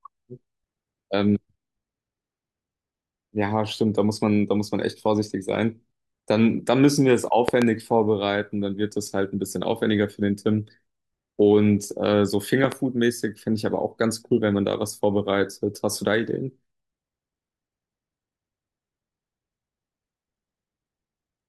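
A loud pop lands at 7.48 to 7.64 s, a quick pair of sharp clicks standing well above the speech at roughly 20 dB louder, and a second double pop follows at 12.64 to 12.74 s, somewhat softer at around 15 dB. Speech runs on unbroken beneath both. The likely cause is a brief voltage spike, such as a connector shifting or static discharge, added to the signal and shaped into a short burst by the circuitry after it.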